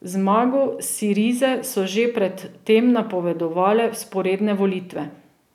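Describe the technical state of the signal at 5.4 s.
At 5.4 s the speech signal is intact, with no audible fault at that moment.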